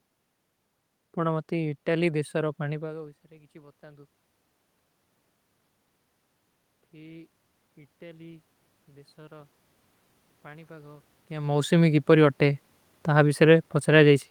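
In this speech recording, from 10.46 to 12.68 s the voice and the room noise swell together by about 4 dB over roughly two seconds. That is automatic gain rising: the gain control judged the input too quiet and raised it gradually, separate from the talker moving around 11 s.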